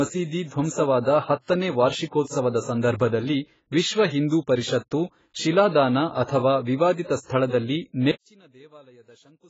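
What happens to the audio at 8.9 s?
One channel inverted, from 8.11 s to the end of the clip, covers 8.9 s. The sound drops by about 29 dB. The likely cause is reversed polarity on one stereo channel, so the shared content cancels in the mono sum and only the channels' small mismatch remains.

AAC compression runs throughout and is also present at 8.9 s. The damage is heavy, with nothing above 7.7 kHz, leaving the speech dull and smeared. The likely cause is low-bitrate AAC-LC quantisation, consistent with about 16 kbps.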